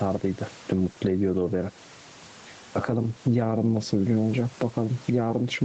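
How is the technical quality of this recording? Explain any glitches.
The speech clip has one fault, gain pumping, which runs through the whole recording. The level breathes. The swing is around 10 dB. The likely cause is input gain set far too high, with a fast limiter or compressor clamping down on every peak and releasing in the gaps. Loud and quiet passages sit too close together, and the speech sounds squashed. The room noise underneath is about 33 dB below the speech. The top end stops at 8 kHz, which fits a call codec such as Opus at a modest bitrate.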